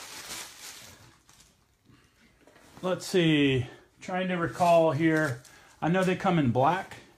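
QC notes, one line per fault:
No technical faults are audible, and the signal stays intact across its whole duration.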